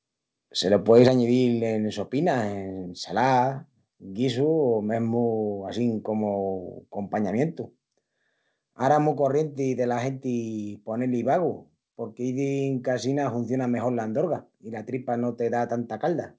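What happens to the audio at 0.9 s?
Microphone overload from 0.9 to 1.08 s, just before "añidil en": peaks exceed the converter's limit by about 2 dB, likely from input gain set too high, so their tops are sheared off, giving a harsh crackle.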